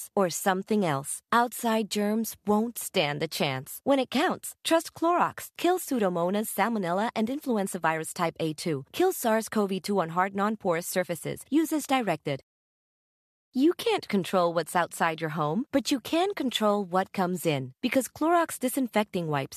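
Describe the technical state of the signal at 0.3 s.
At 0.3 s the speech signal is intact, with no technical fault audible at that moment.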